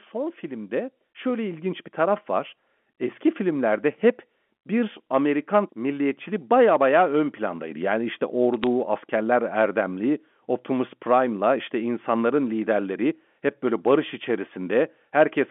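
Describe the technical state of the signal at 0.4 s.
At 0.4 s the automatic gain rising is under way, spanning 0.11 to 2.61 s. The gain control judged the input too quiet and lifted it by about 9 dB. Unlike a sudden level jump, speech and the telephone-band background swell together, smoothly.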